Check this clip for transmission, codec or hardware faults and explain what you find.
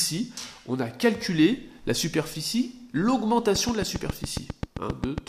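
One fault is present: a train of clicks from 3.56 s to 5.19 s. A short, sharp pulse of much the same shape repeats at a regular 7.39 clicks per second, around fifteen in all, each rising roughly 10 dB above the surrounding sound. Such steady, closely matching impulses point to a likely cause outside the recording itself, either interference from nearby equipment or a faulty connection or power supply. They are heard as an even ticking over the sound.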